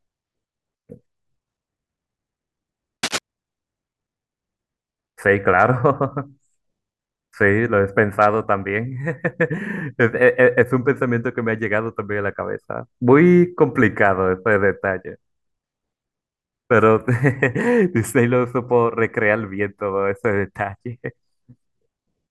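Cable scratch noise appears from 3.03 to 3.18 s, a burst of about 0.15 s in the speech. A dense, ragged rustle sits over the sound, only a little quieter than the speech itself. The likely cause is a worn cable, connector or control being moved. Its contact resistance jumps about rapidly, and those fluctuations add irregular noise directly onto the signal path.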